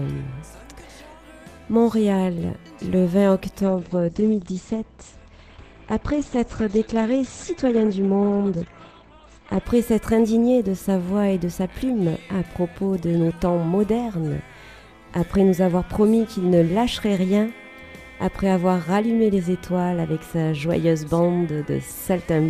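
From 3.62 to 9.62 s the audio abruptly turns dull, nothing above 8.5 kHz, with no gap: an adaptive stream dropping to a lower bitrate, consistent with roughly 12 kbit/s Opus.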